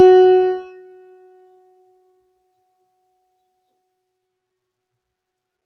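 From the start to the end of the music, a noise suppressor built for speech is acting on the audio. It mistakes held tones, ambience and reverb for background noise and pulls them down. Attacks get through mostly intact. Then the sustained part of each sound sinks, with the level swinging by roughly 20 dB. The result is pumping and fluttering. Notes thin out quickly, and decay tails vanish early instead of ringing naturally.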